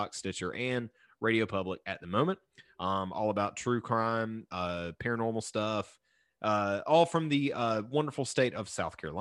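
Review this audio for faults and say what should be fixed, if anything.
Nothing stood out on listening, so there is nothing here that needs fixing.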